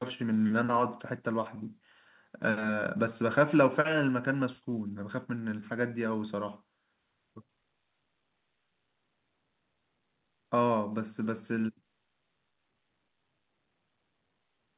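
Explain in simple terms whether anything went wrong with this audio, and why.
Nothing stood out as going wrong on listening to this recording of speech, which has the slightly narrow, telephone-like sound you'd expect from a normal call line.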